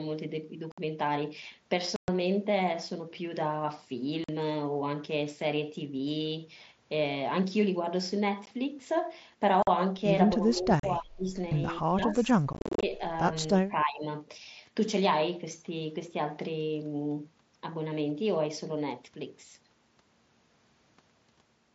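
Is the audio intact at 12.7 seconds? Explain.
No. Two faults overlap at that moment.

From 11.92 to 13.01 s the speech is suppressed in double talk. Both ends were likely talking at once, and the echo canceller, unable to tell the near talker from returning loudspeaker echo, pulled the level down on both. For about a second the speech sinks, by as much as about 20 dB at its deepest, thinning and partly dropping away.

Inside that span, from 12.53 to 12.83 s, there is unconcealed Bluetooth headset packet loss. Small audio packets between the mSBC headset and the phone went missing, and nothing filled the gaps. About 218 ms of sound is gone across those 300 ms, in holes up to 37.5 ms long, which fits 7.5 ms mSBC frames. The result is abrupt cut-outs that make the sound rough and chopped.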